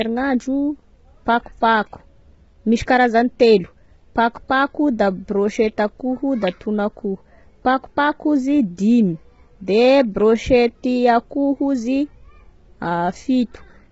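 Throughout, the speech sounds rough and grainy, with hiss filling the gaps between harmonics and nothing above about 7.7 kHz. The likely cause is low-delay AAC compression (AAC-ELD), whose short frames blur pitch detail. The heavy damage fits a bitrate near 16 kbps.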